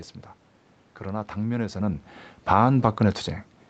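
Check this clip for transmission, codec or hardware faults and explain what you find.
One fault turns up: automatic gain falling, from 2.37 to 2.7 s. The gain control decided the input was too loud or its background noise too strong and eased its gain down by about 3 dB, so the speech and the room noise behind it sink together over that stretch.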